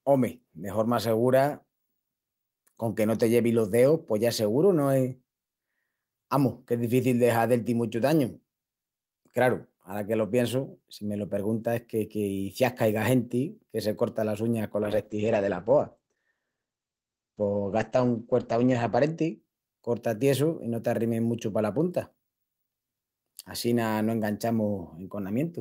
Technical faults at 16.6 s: call bitrate drop

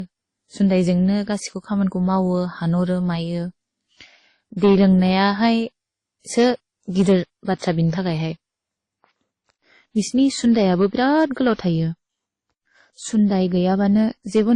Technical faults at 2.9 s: transcoding between lossy codecs

